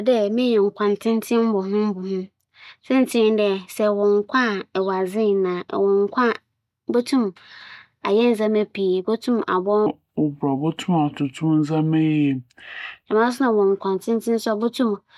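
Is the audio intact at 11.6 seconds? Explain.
No, wrong sample rate from 9.86 to 13.06 s: speech recorded for 44.1 kHz plays near 32 kHz, slowing it to 0.73 speed and dropping pitch 5.6 semitones.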